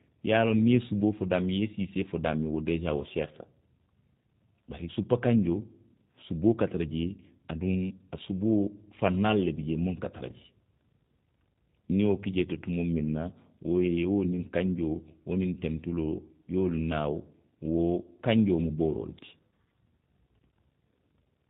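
Speech that carries plainly audible G.729 codec damage for its whole length. Nothing survives above 4 kHz, and the voice is rebuilt from a vocal tract filter, a pitch predictor and a few pulses per 10 ms frame, so it sounds rough and slightly synthetic, which fits an 8 kbit/s G.729A stream. A merely band-limited telephone line would lose the same top end but keep a natural, smooth voice without this buzzy, rebuilt quality.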